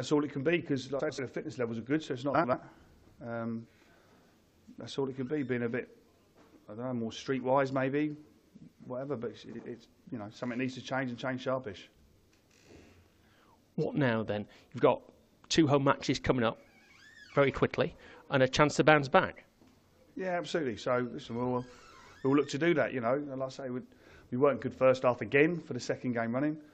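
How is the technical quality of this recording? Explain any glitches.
Three short glitches, all frames out of order, at 0.99–1.19 s, 2.34–2.54 s and 9.49–9.60 s. Adjacent runs were swapped, so each stretch plays its halves reversed, roughly 93 ms blocks in the first two and 46 ms in the last. The result is a brief garbled flutter with no lost time.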